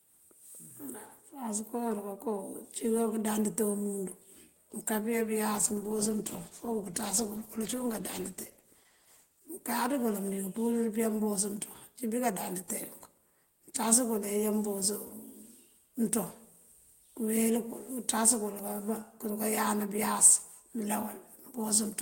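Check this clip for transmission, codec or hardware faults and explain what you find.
One transmission fault is audible in the speech. A call bitrate drop at 5.57 to 9.57 s: the encoder coarsened and trimmed high frequencies, consistent with roughly 32 falling to 13 kbps, leaving speech muffled and watery until recovery.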